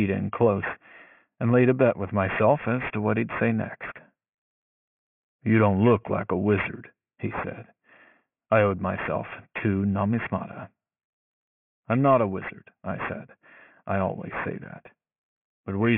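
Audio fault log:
throughout, aliasing: sibilants in this speech come out gritty and metallic, with false tones folded back below 3 kHz at roughly 15 dB under the signal, which fits the sample rate having been cut to about 6 kHz without a low-pass filter first.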